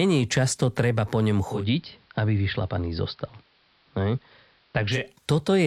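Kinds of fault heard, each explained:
Digital radio blending to analogue, 1.44 to 5.12 s: right after "často treba po ňom" the receiver loses its digital stream and cross-fades over about 245 ms to the same station's AM broadcast, returning to digital at 5.12 s. While on AM the sound goes dull, drops about 2 dB in level, and carries a faint hiss sitting roughly 35 dB below the speech.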